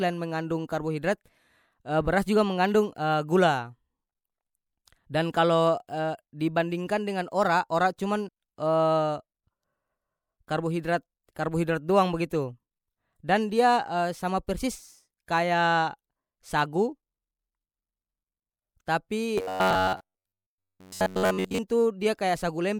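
At 8.27 s, compressed frames are skipped: about three 26.1 ms frames go missing, so the speech jumps ahead and the join is a short smeared blip. From 19.38 to 21.58 s the voice becomes a rigid metallic buzz at 93.8 Hz, likely from repeated short buffers of about 10.7 ms replacing most of the real audio.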